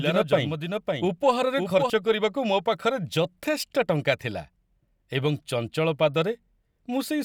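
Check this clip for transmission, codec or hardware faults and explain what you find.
One fault is present: a doubled audio track from the start of the clip until 1.9 s. During that span, a second full-band copy of the speech runs about half a second behind the original, some 5 dB quieter, with no decay or room colouring. The likely cause is the same signal being captured again over a slower path and mixed back in. It sounds like a dry, flat echo trailing each syllable, and it cuts off abruptly at 1.9 s.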